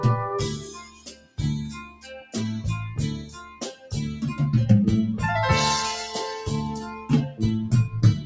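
A noise suppressor applied to music or sounds stays active for the whole clip. It treats sustained, steady material as noise and pulls it down while attacks pass, so the level pumps by something like 10 dB. A waveform shows an uneven, breathing envelope, and a spectrogram shows sustained bands thinning after each onset. The call microphone processing runs through the clip as normal, with nothing above 8 kHz.

Sound cut by the noise suppressor appears four times: 0.57–1.39 s (drop of about 16 dB), 1.71–2.36 s (about 14 dB), 3.22–3.88 s (about 10 dB) and 6.82–7.10 s (about 9 dB). Held sound and decays sink or end abruptly. On the waveform these are hollowed stretches, and on the spectrogram they are fading, truncated tails.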